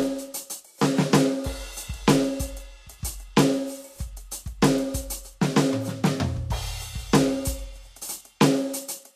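Likely low-bitrate Vorbis compression, around 36 kbps, throughout this music clip: nothing survives above 14.1 kHz, and the coarsely quantised treble turns hissy and grainy.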